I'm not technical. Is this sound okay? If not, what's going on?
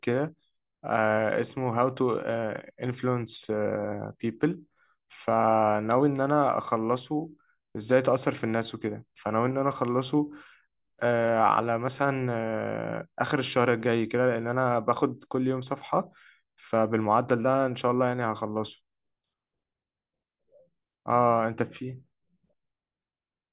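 Yes, this sounds fine.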